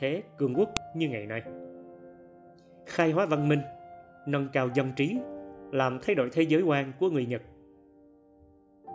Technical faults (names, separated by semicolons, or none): file header played as audio